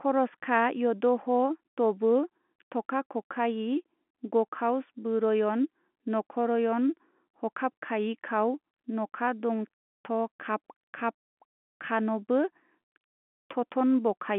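No technical faults can be heard anywhere in the speech. It comes through a telephone-grade G.711 path, with the sound confined to roughly the 200 Hz to 3.4 kHz line band and nothing above about 3.8 kHz.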